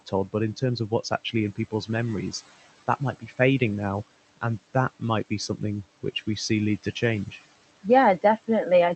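Throughout the clip there are noise suppressor artifacts. The background is pushed down by about 16 dB between phrases and swells back under the speech. Steady room noise would not pump like this.

From 2.87 to 3.4 s, just before "now and that might", the noise suppressor cuts speech. Quiet portions sink by up to about 15 dB, adding up to roughly 150 ms, so they sound swallowed and faded rather than abruptly missing as in a dropout.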